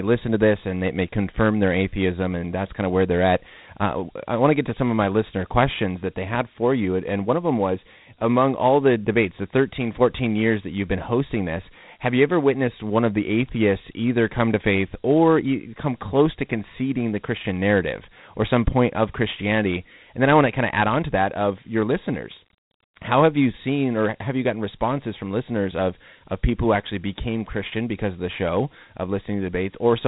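From start to end the speech carries Dialogic VOX ADPCM damage: sound above 3.9 kHz is gone, and a gritty hiss rides on each syllable as the 4-bit step-size coder lags the waveform. The hiss tracks the speech, unlike G.711's steadier grain, which fits roughly 32 kbps.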